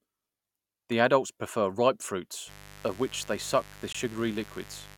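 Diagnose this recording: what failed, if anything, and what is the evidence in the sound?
Analogue wiring: from 2.46 s to the end, a steady, raspy mains buzz on 50 Hz sits about 20 dB below the speech. Sharp switching spikes from a dimmer, rectifier or unshielded cable put harmonics up into the kilohertz range, so it rasps rather than hums smoothly like a pure 50 Hz tone.

Network or playback: at 3.93 s, a hard-edged silent hole of about 19 ms cuts into the sound. This is a gap between stream segments, where segment time stamps left a space that the player filled with silence. Unlike a packet dropout, the audio resumes exactly where it stopped.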